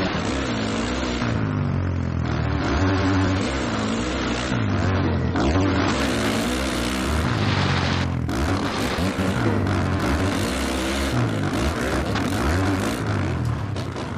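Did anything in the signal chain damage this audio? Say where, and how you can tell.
Yes. For the first 6.0 s the audio has nothing above about 8.4 kHz, with smeared, watery codec artefacts, then it suddenly turns wider-band and clean with no gap or glitch. That is an adaptive stream starting at a low bitrate, a network and playback fault. The player opens on a cheap rendition (the bandwidth fits roughly 33 kbit/s MP3) and switches up (consistent with 128 kbit/s) once it has measured throughput. A congestion-driven downswitch would come mid-stream, usually with a stall.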